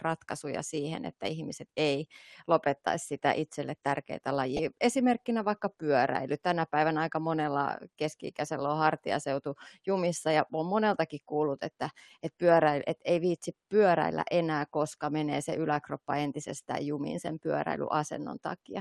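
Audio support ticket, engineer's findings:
Dull, granular, gurgling speech throughout, upper bands flickering. Likely MP2 compression, sub-bands starved of bits at a low rate, consistent with about 80 kbps. Steady, unlike transient errors.

DAB burbling at 4.41–4.68 s and briefly at 16.54–16.57 s. Noise blips in single sub-bands from bit errors corrupting MP2 frames. Isolated bursts, not continuous coding loss. Second burst is short but denser in errors.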